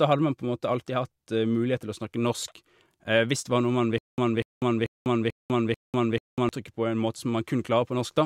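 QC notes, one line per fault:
3.98–6.49 s, stutter with silent gaps: 0.24 s speech fragment replays five times with 0.2 s silence between, likely a stalled stream re-serving its last fragment.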